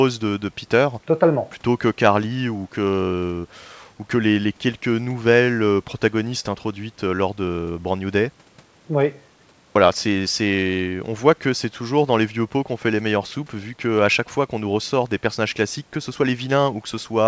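No technical faults can be heard anywhere in the speech.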